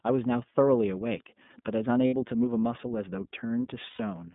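Throughout, the speech carries the iLBC codec's signature: nothing above 3.6 kHz or below about 150 Hz, and a plainly audible rough, slightly synthetic texture. A simple low-pass filter would dull the sound without that grain, which fits coding at roughly 13 kbps in 30 ms frames.

Lost iLBC frames occur at 2.07 s, about 60 ms, and at 3.90 s, about 90 ms, consistent with two and three missing 30 ms frames. Each gap sounds like a held, buzzy vowel rather than silence or a click, and clear speech resumes immediately afterwards.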